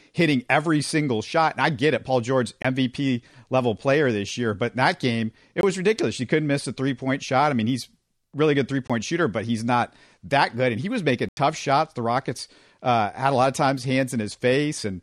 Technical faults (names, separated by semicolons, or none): block of digital silence